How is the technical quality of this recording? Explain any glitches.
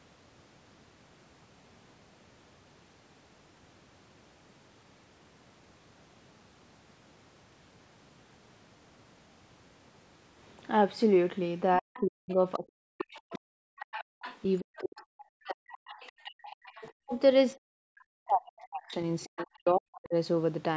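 The recording has two related call-processing faults in its second half, both tied to moments when the far end was also talking. The band stops at 8 kHz, consistent with call microphone processing.

Speech suppressed in double talk occurs from 11.78 to 17.11 s and again from 17.65 to 20.15 s. The speech dips deeply, by up to about 40 dB, for roughly four seconds of the first span and two of the second. The likely cause is an echo canceller that could not tell the local talker from loudspeaker echo while both sides spoke, so it attenuated everything.

The other side's voice leaking through appears four times: 11.94 to 15.03 s, 15.7 to 16.12 s, 16.66 to 17.2 s, and briefly at 19.36 to 19.46 s. A second, quieter voice sits underneath, about 15 to 25 dB below the main speech. It is most prominent in the short burst near 19.4 s. This is likely residual loudspeaker echo that the canceller failed to remove from the microphone signal.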